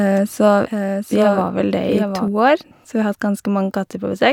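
From the start until 2.28 s, a doubled audio track is heard. A second copy of the speech trails the first by about 0.7 s, somewhat quieter. It carries no reverb or room colour. It cuts off abruptly at 2.28 s. A slower second capture path is the likely cause.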